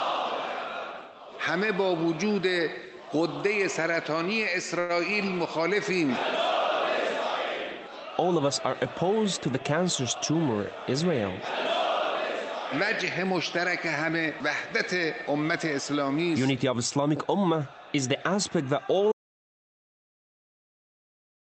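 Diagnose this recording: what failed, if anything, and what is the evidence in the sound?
A packet reached the network stage late, and the jitter buffer ran dry between 4.79 and 4.91 s. Instead of skipping ahead, the receiver extended the last stretch of sound for about 97 ms until the packet arrived, then carried on from the same point, so nothing is lost. You hear a sound hang on slightly too long, with a faint buzz or dip, and the playout delay grows by that same 97 ms.

A jitter buffer speed-up follows in the buffer stage, between 10.15 and 11.11 s. With more audio queued than its target, the receiver repeatedly cut out short pitch-period-sized pieces, removing roughly a tenth of a second in total. Playback runs at about 110% of normal speed while pitch stays put, so that stretch sounds rushed, and any rhythm loses its steady pace. The Opus path around it, at 32 kbps with a band limit near 8 kHz, carries the audio through.

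An audio dropout to silence begins at 19.12 s and runs to the end of the clip. The signal stops abruptly mid-flow and is replaced by silence, with no room tone or noise floor left. That points to the input being lost upstream while the encoder kept writing, likely a disconnected device, a failed link or an accidental mute. Whatever happened after 19.12 s was never captured.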